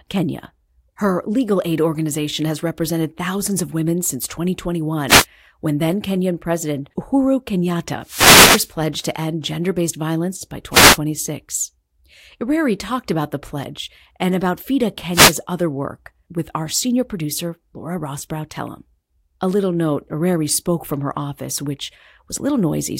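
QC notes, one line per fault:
5.07–5.26 s, 8.02–8.73 s, 10.71–10.98 s and 15.11–15.37 s, wireless microphone noise hit: brief static swishes over the speech. The FM radio link fades as reflected paths cancel, so receiver noise rises through the audio. The 8.02 s hit is the longest, at about 0.7 s.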